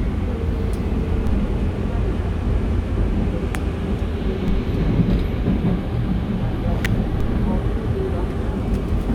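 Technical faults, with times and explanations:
1.27, 4.48 and 7.21 s, DC step: each is a low thump under an unchanged sound. The waveform's zero line jumps by about -18 dBFS, then a high-pass filter near 2 Hz pulls it back over a fraction of a second.
3.55 and 6.85 s, electrical switching spike: a sharp snap, or a tight burst of clicks, sits on top of the sound. It is likely a nearby switch, motor or static discharge arcing, with the audio line picking up that brief surge.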